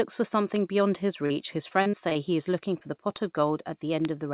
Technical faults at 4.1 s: bit error spike

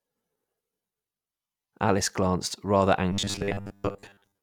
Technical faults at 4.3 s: robotic sound from repeated short buffers

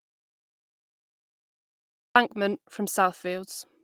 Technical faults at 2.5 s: lost packet rebuilt from error correction

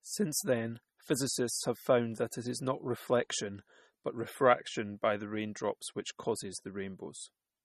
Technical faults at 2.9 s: MP3 compression

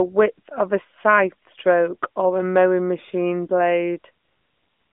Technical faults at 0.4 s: none

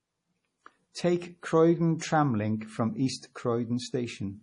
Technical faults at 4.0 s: MP3 compression

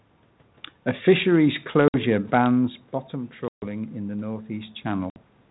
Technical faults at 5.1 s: packet loss on an ADPCM call

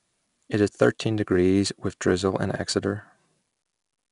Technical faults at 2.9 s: 4-bit ADPCM compression

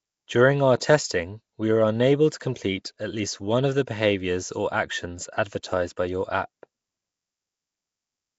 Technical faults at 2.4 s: Nellymoser compression; pre-echo

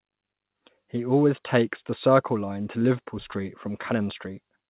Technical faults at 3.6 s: none

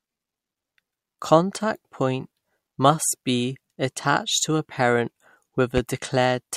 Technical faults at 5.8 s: loud pop

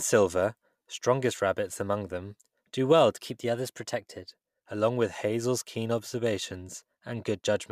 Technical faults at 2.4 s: none

